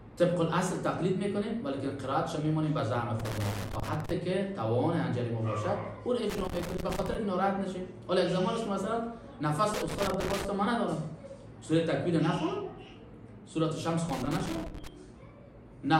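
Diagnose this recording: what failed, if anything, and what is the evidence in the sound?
Analogue wiring failed with loose connector crackle. Irregular scratchy bursts occur at 3.20–4.11, 6.30–7.15, 9.74–10.46 and 14.09–14.87 s. A moving contact chops the signal.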